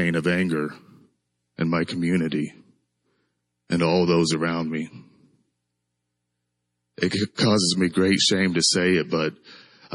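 Adaptive stream at a lower bitrate, from 1.01 s to the end of the clip: the speech suddenly loses its upper treble, with nothing above 11.2 kHz, and coarser codec artefacts take over, with no gap at the switch. The player has dropped to a lower-quality version of the stream because the connection slowed. The abrupt loss of detail fits a step down from MP3 at 128 kbit/s to 32 kbit/s.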